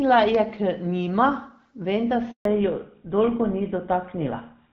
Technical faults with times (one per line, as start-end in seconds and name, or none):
0.35-0.37 loud pop
2.31-2.45 handover gap
2.45-4.72 fallback to narrowband